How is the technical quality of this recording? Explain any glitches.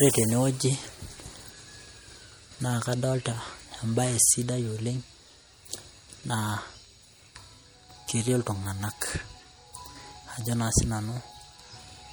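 The recording's quality is limited throughout by one fault: low-bitrate audio saved at a high bitrate. The speech retains coding artefacts, likely from an earlier MP3 encode around 64 kbit/s that a later 256 kbit/s pass cannot restore. A spectrogram shows content stopping near 20.2 kHz.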